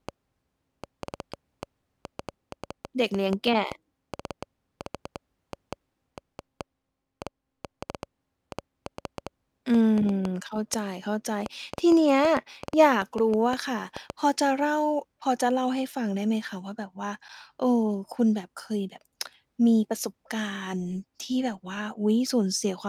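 From 0.09 s to 14.11 s a train of clicks runs under the speech: about seventy near-identical pulses, averaging 4.8 per second at uneven spacing and peaking roughly 10 dB above the signal, likely from equipment interference. Unlike random crackle, each click has the same shape and continues through pauses.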